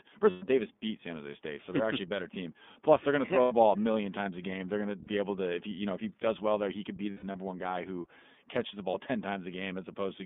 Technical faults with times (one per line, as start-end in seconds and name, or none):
0.00-10.26 iLBC codec
0.30-0.44 lost iLBC frames
3.41-3.53 lost iLBC frames
5.04-5.07 lost iLBC frames
7.11-7.36 lost iLBC frames
8.91-8.95 lost iLBC frames